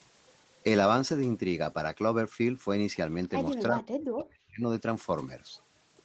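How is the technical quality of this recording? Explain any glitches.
There's one clear glitch: a stretch where the speech gets pushed way down. Everything sits within a band topping out around 8 kHz, which fits a call codec like Opus running at a modest bitrate.

From 3.69 to 4.68 s, about a second, the speech sinks, dropping by roughly 40 dB at its deepest. That's likely speech suppressed in double talk: the far end was talking too, and the echo canceller couldn't tell this talker apart from loudspeaker echo, so it clamped down on everything.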